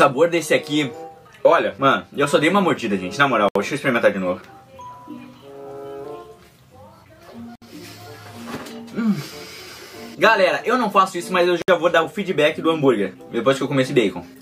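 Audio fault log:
3.49–3.55 s, 7.55–7.62 s, 11.62–11.68 s: gap at a join of encoded pieces. The sound drops out for 69, 64 and 64 ms, once every 4 s, then picks up where it left off. The separately encoded chunks were spliced with their encoder delay and end padding still in.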